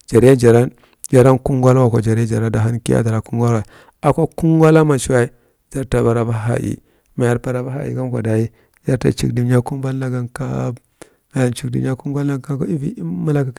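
Hard clipping breaks through the speech five times: 0.16 to 0.56 s, 1.15 to 1.31 s, 1.67 to 1.70 s, 4.08 to 4.10 s and 4.63 to 4.79 s. On each, the peaks exceed what a stage in the chain can pass and are sheared flat, by about 4 dB at the first, second and last, about 2 dB at 4.08 s and about 1 dB at 1.67 s. The flattened tops add high harmonics, so the clipped peaks come through as crackle.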